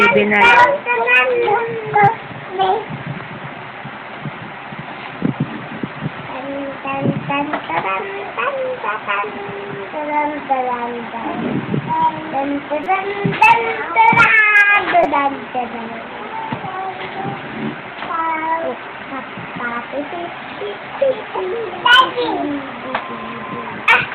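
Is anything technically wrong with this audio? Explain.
Yes, there are two repeated buffer faults. At 12.84 to 12.86 s and again at 15.04 s, fresh audio failed to reach the output in time, so the device replayed its last block of about 5.3 ms, which fits a 256-sample buffer. The block sounds four extra times the first time and three the second, giving a brief buzzy click. Unlike a dropout, the gap is filled with repeated sound rather than silence.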